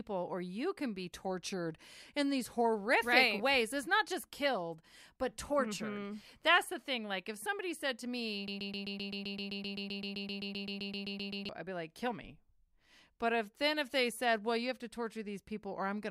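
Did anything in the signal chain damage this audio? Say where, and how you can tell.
Yes: a broken-record loop, likely from a stalled playback buffer, replays one 0.13 s fragment 23 times from 8.48 to 11.49 s, between "somebody said to me" and "I'd be like kill", so the audio that belonged there is lost.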